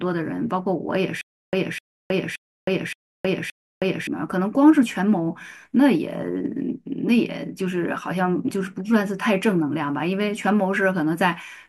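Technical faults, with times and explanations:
1.21 to 4.07 s, stutter with silent gaps: a 254 ms burst of speech plays five times, each followed by 318 ms of digital silence, in a steady 572 ms cycle. A stalled stream likely replayed its last fragment at every retry, losing that span's speech.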